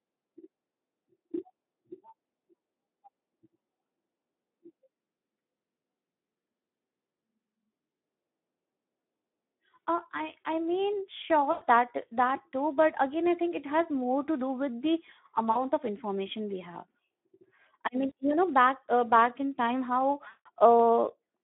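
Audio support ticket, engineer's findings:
Speex codec, whole clip: hoarse, grainy speech, audible the whole time. The line is band-limited to roughly 200 Hz to 3.6 kHz, and the damage fits a low Speex setting around 11 kbps, where the CELP excitation is too starved of bits to sound clean.

VoIP packet loss concealed by the speech codec at 11.51 s (about 100 ms), 15.51 s after "to do with the" (40 ms), 18.07 s after "I mean" (40 ms), and 20.27 s after "back in time how" (180 ms, the worst). Each one has a stretched, fading sound where the decoder extends its last pitch and filter while the gain drops. The audio still sounds off for a moment after the packets come back.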